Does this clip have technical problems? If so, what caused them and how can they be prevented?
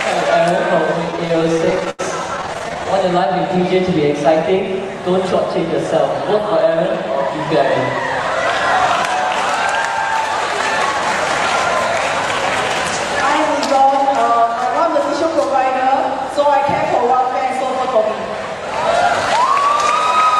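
Yes. Repeated stalls (stutter) occur from 1.11 to 2.01 s and again from 2.37 to 2.87 s. Packets arrived late or more slowly than playback consumed them, so the jitter buffer kept running dry, and the receiver extended the last sound to fill each wait: about 233 ms in the first stretch (longest wait 86 ms) and 103 ms in the second (none over 13 ms). Nothing is lost, but the sound drags and stutters. A larger or adaptive jitter buffer on a steadier network path would prevent it.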